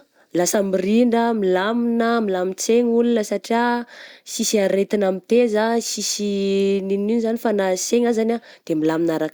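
No technical faults can be heard anywhere in this recording of speech.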